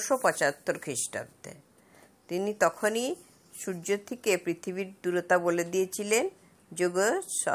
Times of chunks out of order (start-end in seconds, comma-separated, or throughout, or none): none